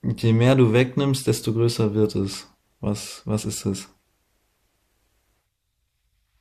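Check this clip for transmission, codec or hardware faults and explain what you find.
No transmission, codec or hardware faults are audible anywhere in this speech recording.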